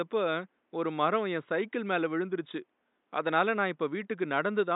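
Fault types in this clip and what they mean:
No faults can be heard in this speech clip.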